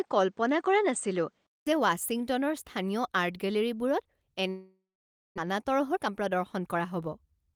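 From the start to 1.67 s, the recording was most likely coming from a poorer input device, which stops passing anything above 8.8 kHz and adds its own faint background noise, roughly 45 dB below the speech. The speech sounds duller and boxy, though its loudness hardly changes. When the input switches back at about 1.67 s, there is a short gap of silence lasting 0.2 s before the fuller, brighter tone returns.

From 4.49 s to 5.40 s, a long network dropout likely stopped audio from arriving. The receiver covered the first part of the gap by stretching the last sound it had into a buzzy, fading continuation. After that it fell back to about 0.55 s of silence. Roughly 0.6 s of speech was never played, so the speech resumes at a later point with a jump in content, and the delay changes by around a third of a second.

From 5.48 s to 7.53 s, the jitter buffer was holding more audio than it aims for, so the receiver sped up playback to reduce that extra delay. 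It repeatedly cut out tiny pieces a pitch period or so long, about 0.2 s in total. The speech runs at 111% of normal speed while keeping the same pitch, so it sounds hurried rather than higher.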